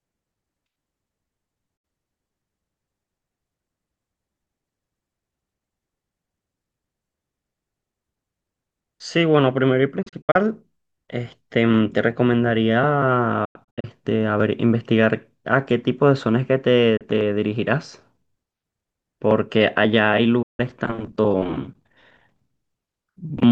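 Digital broadcast dropouts cut the speech at 1.77, 10.02, 13.45, 16.97 and 20.42 s. The receiver lost frames and muted, fading to silence within 8 ms. At 10.02 and 13.45 s, holes scatter over 0.3 and 0.4 s. Clean silence, not warbly concealment, marks them.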